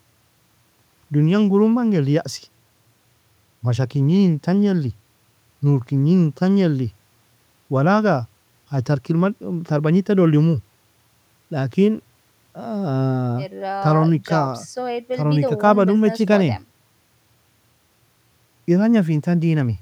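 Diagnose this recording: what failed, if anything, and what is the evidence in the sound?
Nothing in the recording stood out as a failure on listening; the speech comes across without any audible problem at any stage of the chain.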